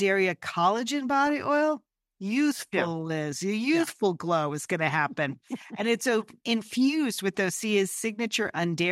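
DAB burbling occurs at 1.27 to 1.30 s, just before "oil youthful yeah", and again at 7.92 to 7.99 s. Uncorrected bit errors corrupt sub-band levels briefly. It sounds like short blips of noise.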